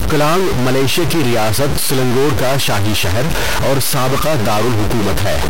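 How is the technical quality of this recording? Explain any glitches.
The recording has a clear technical fault running through the whole clip. A stuck bit distorts the speech from start to finish. One data bit is likely held at a fixed value, from a broken line or converter. About half the samples land off by that bit's weight, following the waveform. The result is distortion, and the pauses fill with noise instead of falling silent.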